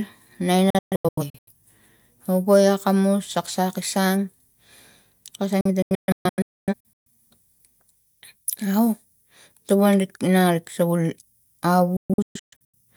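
Three digital broadcast dropouts hit this speech, at 0.70 to 1.52 s, 5.61 to 7.07 s and 11.97 to 12.75 s. Each time the receiver stops getting good frames and mutes with a fast 3 ms fade. That leaves scattered holes up to 128 ms long, or 256 ms in the middle one.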